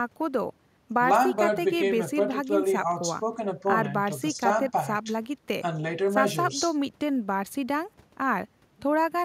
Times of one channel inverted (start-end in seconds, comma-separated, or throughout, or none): none